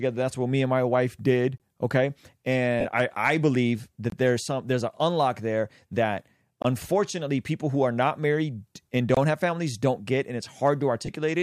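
At 1.58–1.60 s, 4.10–4.12 s, 6.62–6.65 s (after "an unlock there that") and 9.15–9.17 s (between "are not married and" and "have families don't get"), a gap between chunks leaves 23 ms of hard-edged silence every 2.5 s, visible as thin blank vertical stripes. At 2.80–2.85 s, just before "I I believe", and again at 11.06–11.09 s, lost LE Audio frames (45 ms and 30 ms) are concealed with a fading, randomised spectrum that sounds like a noisy smear and shows as a blurred patch.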